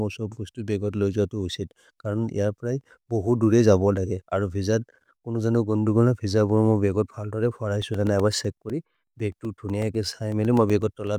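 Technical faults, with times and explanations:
7.82–11.07 s, periodic USB or driver dropouts: something blocks the USB bus or audio driver every 0.125 s, and about 2 ms of audio is replaced with silence each time, so around thirty evenly spaced ticks cut into the speech, eight per second.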